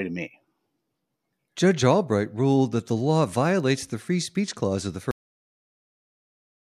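At 5.11 s the speech hits a cut-off end: the final buffers were never written, so the audio stops mid-sound and drops to digital silence with no decay. The waveform ends abruptly in a flat line, and the spectrogram shows energy ending in a hard vertical edge.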